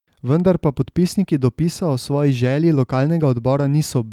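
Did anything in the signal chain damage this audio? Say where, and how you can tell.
No, nothing in the signal chain has damaged this speech recording. Listening across the whole clip, no stage from capture through to playback leaves an audible mark on it.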